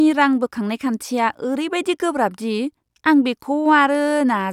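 No technical faults can be heard anywhere in the speech here.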